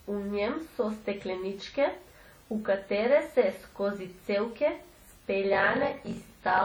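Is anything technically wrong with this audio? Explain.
Yes, two faults are audible.

Throughout the speech there is heavy transform-codec damage, most likely WMA compression, and it sounds like a low bitrate of around 32 kbps. The encoder quantises long blocks coarsely, so noise smears across tens of milliseconds around each syllable and weaker spectral detail drops out. The result is a ringing, washy quality, with a hiss that swells and fades with the level of the speech.

From 5.51 s to the end at 6.65 s, there is a block size mismatch (padded). One stage delivers shorter blocks than the next stage reads, which fits a 1024-sample read size, and zeros fill the remainder of each block. The repeated gaps produce a buzz at 46.9 Hz. Because silence is inserted in every block, the speech runs at 0.861 times normal speed while keeping its timbre.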